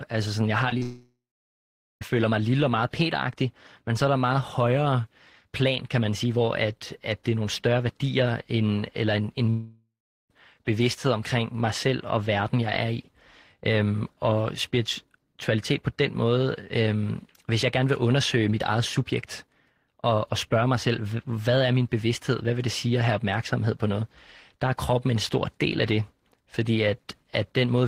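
Just after "sådan jeg har", short concealed packet loss strikes at 0.69–0.73 s and 0.78–0.82 s: about 20 ms, then 40 ms, of missing audio patched by extending the preceding sound. Each is a brief smeared wobble, seen as blurred, stretched harmonics in the spectrogram.

From 0.82 to 2.02 s the speech stops, likely from a long network dropout. A fading synthetic buzz or hiss gives way to about 0.8 s of near-silence, a flat waveform and an empty spectrogram. Another such gap, likely the same cause, runs 9.50–10.31 s between "end eller en en" and "bevidsthed omkring mig selv", going quiet for about 0.4 s.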